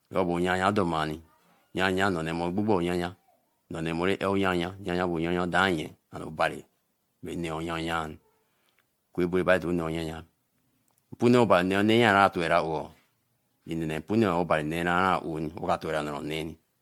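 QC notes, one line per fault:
throughout: generation loss. The speech was likely decoded and re-encoded as MP3 about ten times, consistent with 96 kbit/s, each pass requantising on a shifted frame grid. Accumulated noise and spectral holes make it swirly, hollow and smeared, with blurred attacks and nothing above 19.9 kHz.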